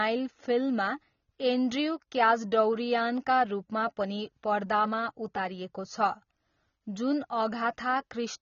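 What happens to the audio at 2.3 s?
At 2.3 s the speech sounds dull and smeared, with a warbling, fizzy texture on sustained sounds and sibilants, and nothing above 7.1 kHz. This is not a moment-specific event; the damage runs through the whole clip. It is likely AAC compression: AAC-LC squeezed hard, which fits a rate around 24 kbps, pulls its cut-off down and quantises the remaining spectrum so coarsely that gaps and swirling artefacts become plainly audible.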